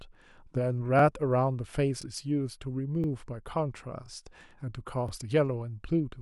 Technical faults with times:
0.99-1.02 overlapping chunks
2.02-2.04 overlapping chunks
3.04-3.06 overlapping chunks
4.06-4.08 overlapping chunks
5.08-5.11 overlapping chunks

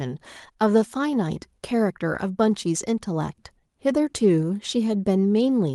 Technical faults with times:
none

